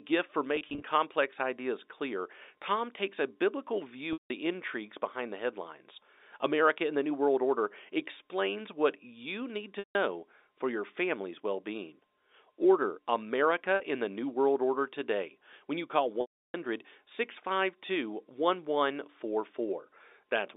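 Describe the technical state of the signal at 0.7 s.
Packet loss with pitch repetition runs from 0.56 to 0.82 s: about 140 ms of audio drops out in short gaps, none longer than 30 ms. The receiver fills each gap by repeating the last pitch period of the speech, so the sound turns briefly held and buzzy.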